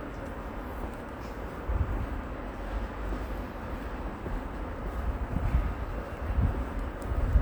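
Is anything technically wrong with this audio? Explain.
No, nothing in this recording of sounds stood out as a technical problem on listening.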